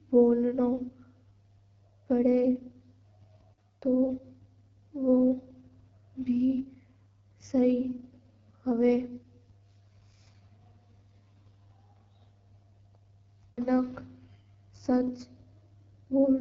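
From start to end, the speech carries the sound of the AMR wideband (HD Voice) codec at a low rate. The roughness points to one of the lowest modes, which fits 8.85 kbit/s. The codec models the voice with a pulse-driven vocal tract filter up to 6.4 kHz. At this rate the model is too coarse. Voices turn rough and raspy. The top band is filled with shaped noise, and nothing sounds above 7.5 kHz.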